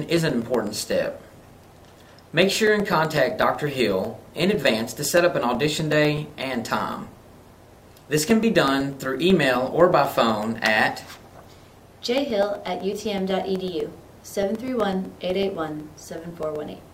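Throughout the audio, from 0.17 to 16.8 s, there's a steady tick every 0.125 s, eight a second, wherever there's signal. That's periodic USB or driver dropouts: something stalls the bus or driver on a fixed cycle, and a couple of milliseconds drop to silence each time.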